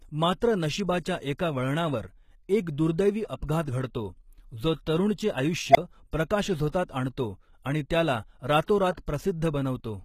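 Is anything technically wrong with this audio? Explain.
Yes. Across the whole speech clip, the treble sounds plainly damaged: sibilants come out gritty and metallic, with a synthetic sheen above the lower band. This is likely HE-AAC compression at a low bitrate, which points to roughly 20 kbps. The codec sends only the lower spectrum in detail and regenerates the highs by spectral band replication, copying lower bands upward under a coarse envelope. Harmonics therefore fail to line up across the crossover, which gives the s sounds their artificial edge.

At 5.71 s, just after "जो तरूणचे", a tone near 700 Hz swells over about 42 ms until it is very loud. It then cuts out for about 25 ms, ending by 5.77 s. This is an unstable filter. A recursive filter with bad coefficients fed its output back until it grew without bound, clipped, and overflowed. The audio dropped out until the filter reset, so the event is heard as a squeal followed by a short gap.

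Pre-echo occurs twice. At 6.69 s, a short hiss of about 44 ms runs ahead of an attack just before "आणतो आणि त्याला". At 8.64 s, right after the same words, about 43 ms of hiss again precedes an attack. In both places the onset sounds smeared. A transform codec spreads quantisation noise across a whole block, so noise sized for the loud attack also fills the quiet moment before it.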